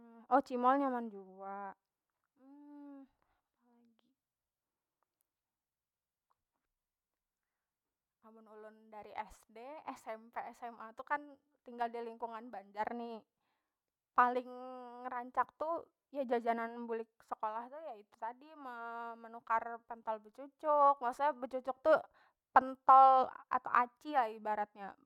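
No technical faults can be heard anywhere in the speech recording, and the signal holds steady and continuous throughout.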